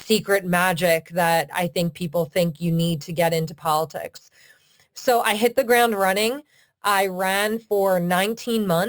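From start to finish the speech carries imaging from sample-and-hold upsampling. The sound points to a 12 kHz source lifted to 44.1 kHz by simply repeating each sample, with no smoothing filter. That leaves mirrored copies of the spectrum, the first sitting between 6 kHz and 12 kHz at about 16 dB below the signal. You hear it as a bright, metallic fizz riding on the speech, rising and falling with it, and its lowest band moves the opposite way to the pitch.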